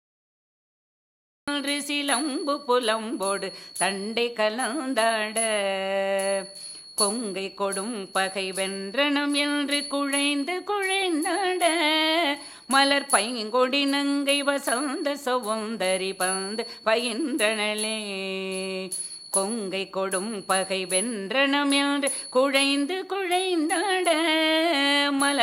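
The clip opens on dead digital silence, and at 1.48 s the sound bursts in already under way, with no attack or fade-in leading up to it. This is a cut-off start: capture or the stream began late, so the earliest part of the sound was never recorded, and the first samples jump straight from silence to mid-signal. The entry lands abruptly, as if the sound had been sliced open partway through.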